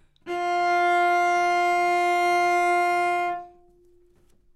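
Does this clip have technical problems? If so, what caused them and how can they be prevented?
No, the recording shows no technical problems, with the signal holding steady throughout and nothing in it that points to a fault in capture, transmission or playback.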